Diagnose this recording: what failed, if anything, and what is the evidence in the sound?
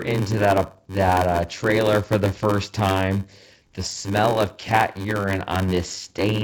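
A steady 93.8 Hz buzz runs under the speech throughout, and delivery is slowed to 0.861 times normal speed at about normal pitch. This is a block size mismatch (padded) at the driver or buffer stage: short blocks are zero-filled, fitting a 512-sample read.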